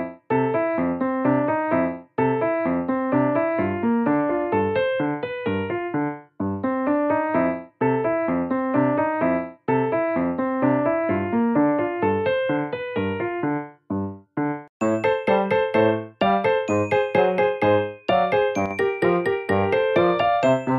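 At 18.66 to 18.71 s the level suddenly dips by about 6 dB for 50 ms, likely one channel dropping out before the mono sum.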